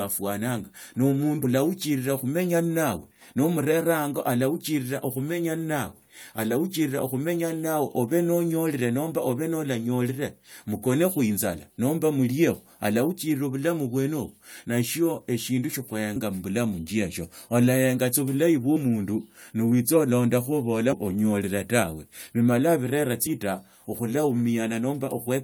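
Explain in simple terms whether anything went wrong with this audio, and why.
Brief chirps or blips cut into the speech five times, at 1.43, 16.15, 18.75–18.77, 20.91–20.93 and 23.26 seconds. This is damaged data in a compressed stream: some of the data was corrupted, so the decoder misread it and skipped ahead to resynchronise.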